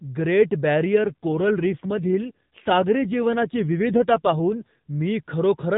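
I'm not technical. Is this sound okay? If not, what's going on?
No. From about 0.94 to 4.79 seconds there is an AMR rate drop. The phone network squeezed the call into fewer bits, so the speech turns rougher and buzzier, almost robotic. Nothing cuts out, and the clearer sound returns afterwards.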